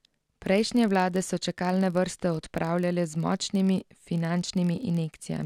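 A filter restarted on every block loses its state each time, likely at 1024-sample blocks, so a 43.1 Hz buzz of small ticks runs throughout the speech, tracking its level.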